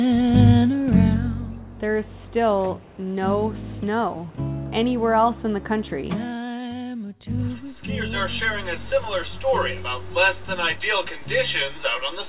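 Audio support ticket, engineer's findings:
Nothing stood out on listening; the call path sounds as expected for G.711 mu-law at 64 kbps, with nothing above 4 kHz.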